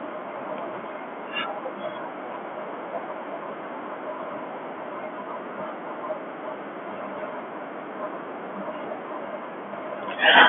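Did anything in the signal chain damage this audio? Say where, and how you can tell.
No, nothing stood out on listening that would point to damage at any stage of the chain.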